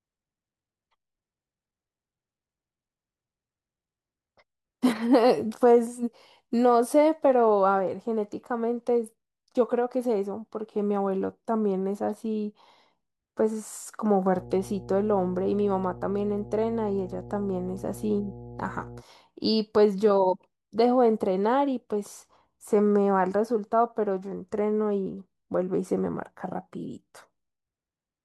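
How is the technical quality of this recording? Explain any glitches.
The recording has one clear glitch, a stretch of mains hum in the middle of the speech.

Mains hum runs from 14.33 to 19.03 s. A ground loop or a nearby transformer is letting the 60 Hz power line leak into the signal path, so a steady low drone at 60 Hz, with some low harmonics above it, sits under the speech. It is roughly 20 dB below the speech.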